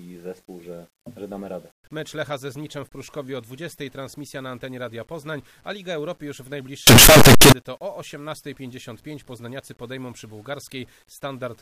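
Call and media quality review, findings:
Very loud, harsh distortion from 6.87 to 7.52 s, quiet parts as loud as peaks. Likely signed and unsigned mixed up in 8-bit sample decoding: top bit flipped, each zero crossing jumps full range.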